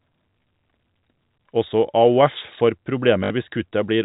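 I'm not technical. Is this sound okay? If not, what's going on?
No. At 3.24 to 3.3 seconds the speech gives a brief robotic stutter: packet loss with last packet repeated, filling 60 ms of missing sound with copies. The telephone-style sound elsewhere comes from ordinary G.711 telephone coding.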